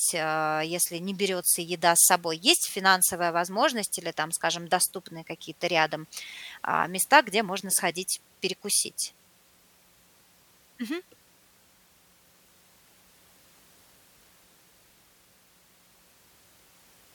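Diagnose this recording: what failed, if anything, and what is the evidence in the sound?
Nothing failed, and there is no evidence in the sound of a fault at any stage of the recording.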